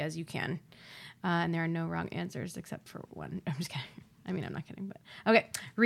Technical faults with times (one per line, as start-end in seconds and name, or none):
none